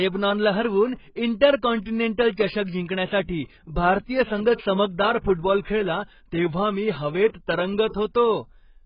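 From start to finish the speech sounds dull and smeared, with a warbling, fizzy edge on sibilants, the heavy damage of what is likely AAC compression at a very low bitrate, around 12 kbps. A spectrogram shows nothing above 5.1 kHz.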